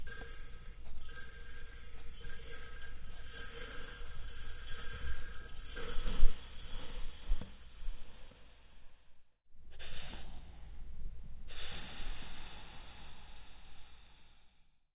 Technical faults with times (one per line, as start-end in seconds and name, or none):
none